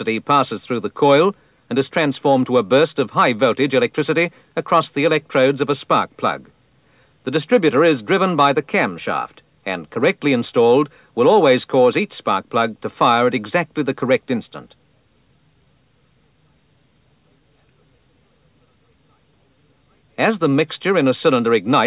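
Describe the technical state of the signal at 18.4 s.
At 18.4 s the signal is intact, with no audible fault at that point.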